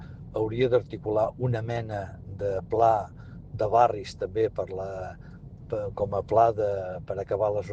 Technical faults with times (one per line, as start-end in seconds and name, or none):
none